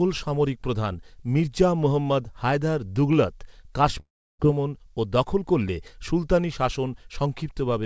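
It's a speech clip where, from about 4.0 to 4.41 s, the sound smears into a fading buzz and then drops to near silence for roughly a third of a second before returning at "ও দখল করলে সুলতানী" with that stretch simply gone, likely a long network dropout covered by the receiver's concealment. Nothing comes through above 8 kHz, which fits a wideband call codec such as G.722.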